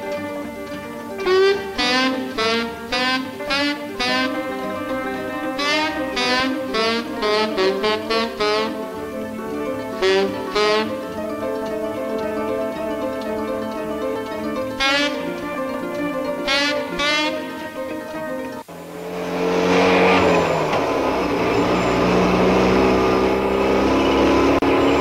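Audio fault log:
24.59 to 24.62 s, gap at a join of encoded pieces: the sound drops out for about 33 ms, then carries on from where it stopped. Two separately encoded segments were butted together without removing the encoder's start-up silence and last-frame padding, so that dead time stays in. On a waveform it shows as a flat stretch with edges smeared by the codec; a spectrogram shows a thin vertical band empty across all frequencies.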